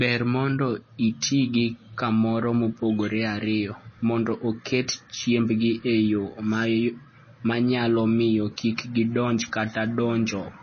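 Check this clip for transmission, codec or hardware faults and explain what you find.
One codec fault runs through the whole clip. The speech carries plainly audible MP3 compression, likely from a low-bitrate encode. Nothing sounds above 6.5 kHz, which fits a bitrate around 24 kbps. Starved of bits, the encoder drops the treble and switches weak frequency lines on and off between frames, giving a watery, swirling texture. Plain low-pass filtering would dull the top end without that swirl.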